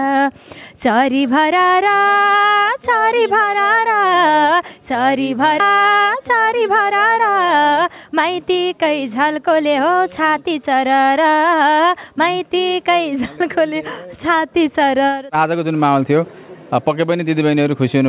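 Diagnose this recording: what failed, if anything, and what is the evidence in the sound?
At 5.6 s there is a skip ahead in the jitter buffer stage: roughly 0.7 s of audio is gone, with no fill and no silence, so the sound on either side of the jump is butted together. An overflowing buffer discarded queued audio to recover latency.

From 5.70 to 7.65 s the jitter buffer speed-up runs at 108 percent, trimming out short pitch-period slices until roughly 0.15 s more has been removed. The sound plays faster at unchanged pitch, over the G.711 A-law path's 4 kHz band limit.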